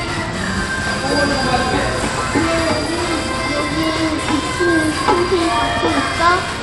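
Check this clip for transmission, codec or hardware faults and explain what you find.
One codec fault is present across the whole clip. Throughout, the treble thins and flickers with gritty noise riding on the sound, likely Bluetooth SBC compression at a low bit pool, consistent with roughly 96 kbps.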